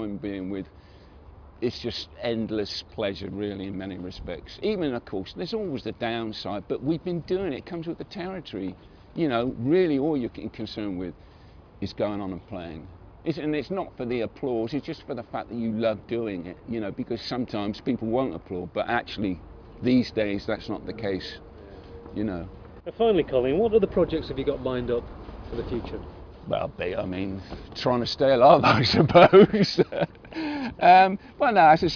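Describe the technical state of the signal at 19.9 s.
At 19.9 s the audio is intact, with no fault present at that moment.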